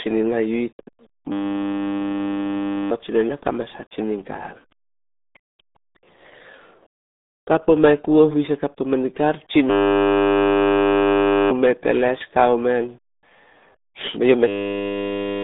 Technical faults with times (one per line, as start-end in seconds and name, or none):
0.00-15.44 RealAudio 14.4 codec